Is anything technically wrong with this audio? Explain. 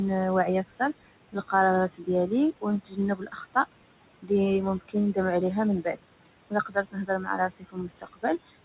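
Yes. A noise suppressor is working too hard on this speech, pulling the room noise down and taking parts of the speech with it.

Noise suppressor artifacts run through the whole clip. The background is pushed down by about 21 dB and rises under the speech. That pumping, rather than a steady hiss, separates it from the plain room noise, which sits about 15 dB below the speech.

Speech cut by the noise suppressor appears at 0.68–1.53 s, 1.88–3.56 s, 4.14–4.31 s, 4.79–5.18 s (ending just before "عليها من") and from 5.82 s, just after "عليها من", to the end. Within each span, soft sounds are treated as noise and sink by about 15–22 dB, so they sound swallowed. Unlike a dropout, the sound fades rather than stopping dead.

The lack of anything above 4 kHz comes from the G.711 call codec's narrow band.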